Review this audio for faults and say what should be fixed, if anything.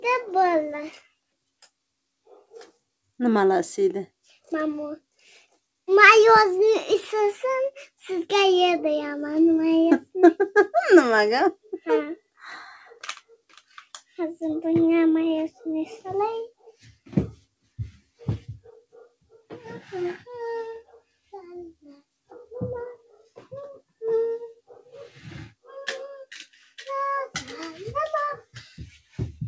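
No faults turned up in the review, so nothing needs to be fixed.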